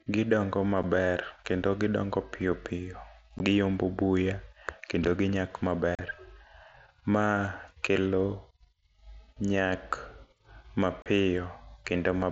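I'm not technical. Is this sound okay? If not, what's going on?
No. You can hear unconcealed Bluetooth headset packet loss. Tiny pieces of speech vanish between headset and phone. They leave abrupt gaps at 0.83, 3.39, 5.95 to 5.99 and 11.02 to 11.06 seconds.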